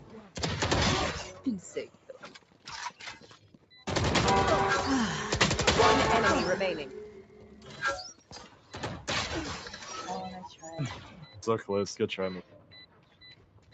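A speech-oriented noise suppressor was left running on this material throughout, and it keeps misreading sustained and ambient content as noise. Its gain swings by around 10 dB, so held parts and decaying tails sink while onsets punch through, giving a pumping, fluttering, thinned-out character. The band stops near 8 kHz, as expected for the call path's Opus coding, which was set to about 64 kbps.

The suppressor cuts the sound hardest at 0.00–0.38 s, 1.86–2.67 s, 3.19–3.71 s, 7.05–7.81 s, 8.14–8.74 s, 11.00–11.38 s, and from 12.42 s to the end. Most of these drops reach about 9 dB, with about 8 dB at 8.14 s and about 6 dB at 11.00 s. In each stretch the steady or fading material dips audibly below its surroundings and tails are clipped short.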